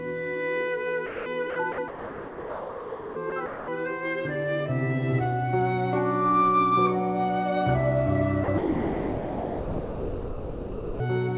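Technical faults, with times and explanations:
1.06–1.26, 1.50–1.56, 1.72–1.78, 1.88–3.16, 3.30–3.32, 3.46–3.68, 8.44–8.48 and 8.58–11.00 s, sound dropped by the voice detector: the sound gives way to steady, featureless comfort noise, longest for about 1.3 s at 1.88 s and 2.4 s at 8.58 s. It returns each time. The likely cause is the sender's voice detector classing the audio as background and halting transmission, with the receiver filling in noise, all heard through the call path's 4 kHz band limit.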